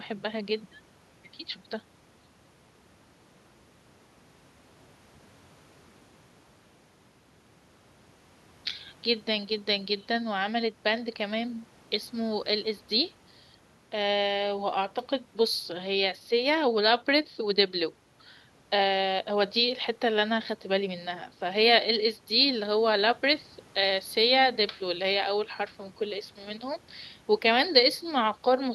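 No technical faults can be heard in this audio.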